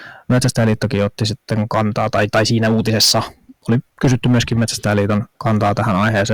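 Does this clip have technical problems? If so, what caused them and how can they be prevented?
Yes. The speech has hard clipping from start to finish. The signal was driven about 11 dB beyond what a stage in the chain could pass, so around one sample in twenty sits at the ceiling and the peaks are sliced flat. Those squared-off tops generate high-order harmonics, heard as a harsh, buzzy fuzz on every loud syllable. To prevent it, set input gain so peaks stay several decibels below full scale, or place a limiter before the overloading stage.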